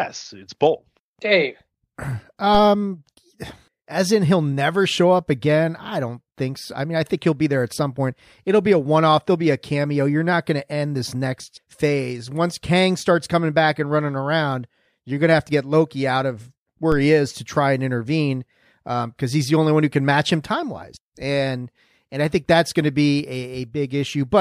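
At 2.55 s and 16.92 s a DC step shifts the waveform's zero line by about -15 dBFS, heard as a low thump that then decays away through a roughly 5 Hz high-pass while the speech continues unchanged.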